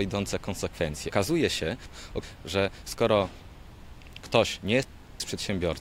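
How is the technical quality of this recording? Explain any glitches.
Two chunks-out-of-order glitches disrupt the recording. From 1.12 to 2.23 s, a 0.37 s chunk plays two chunks late; from 3.72 to 5.20 s, another plays three chunks late. Each displaced chunk leaves hard joins and a jumbled stretch. These show as waveform discontinuities and vertical spectrogram lines at the joins.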